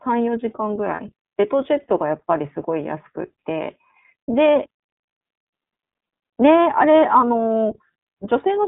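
The whole clip runs through the iLBC codec, so the speech sits in a narrow line band of roughly 150 Hz to 3.7 kHz with nothing above. Each 30 ms chunk is coded on its own, which fits iLBC's 13.33 kbps mode. That gives the voice a plainly audible rough, slightly synthetic edge.

From 0.96 to 1.00 s there's a lost iLBC frame, about 30 ms, which fits a single dropped packet. The decoder bridges it by repeating the last pitch cycle with some noise mixed in, so you hear a brief held, faintly buzzy vowel. Because each frame is coded independently, the speech snaps back right after.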